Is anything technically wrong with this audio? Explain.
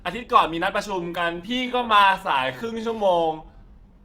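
Yes. From 0.81 s to the end, the speech slows to about 0.68 times its pace but keeps its pitch, so it drags. This is likely a time-stretched section, lengthened by repeating short pieces.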